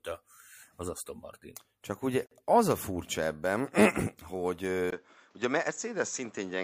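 A gap at a join of encoded pieces opens at 2.26 s and lasts about 49 ms, ending at 2.31 s just before "az a furcsa ebben". The speech had been encoded in separate pieces, which fits 6-second segments, and stitched together without trimming. The encoder's start-up delay and the padded final frame both remained, leaving a short hole of silence in continuous speech. Its edges are softened by the codec, and the speech resumes exactly where it broke off.

At 4.90 s there is a switch to a poorer input device, running to the end of the clip. It begins with a 20 ms dropout, after which the sound turns duller and boxier. Nothing remains above 7.9 kHz, and a new background noise sits roughly 40 dB under the speech, while the loudness stays about the same. The likely cause is the system changing its input mid-recording to a narrower-band microphone or a headset in call mode.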